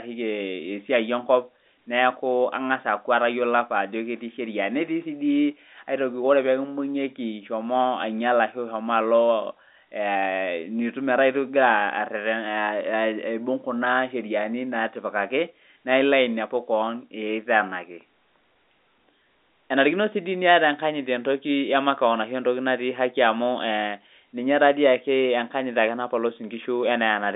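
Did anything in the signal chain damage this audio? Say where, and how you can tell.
No, the speech comes through an intact telephone path: the band runs from about 250 Hz to 3.7 kHz with nothing above 3.8 kHz, which fits G.711 telephone coding on a 64 kbps A-law line.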